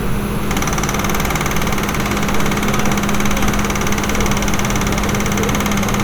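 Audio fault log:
Nothing to flag here; I listened closely and didn't catch a single fault anywhere in these sounds.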